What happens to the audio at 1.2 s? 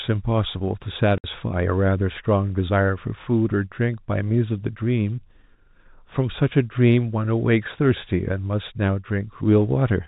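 Packet loss filled with silence cuts a 60 ms hole from 1.18 to 1.24 s. The receiver plays nothing where the packets went missing, and the gap fits three 20 ms packets. The speech drops out abruptly, with hard edges at both ends.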